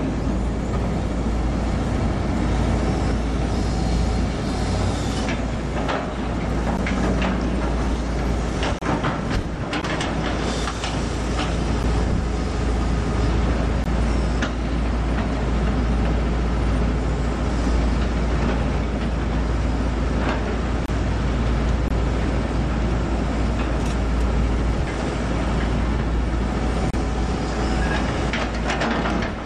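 Hard-edged silent dropouts of roughly 10 to 30 ms cut into the audio at 6.77, 8.79–8.82, 9.82, 11.83, 13.84, 20.86–20.88, 21.88–21.91 and 26.91–26.94 s. These are gaps between stream segments that fall on one-second boundaries, where mismatched timestamps leave holes the player fills with silence, without losing any audio.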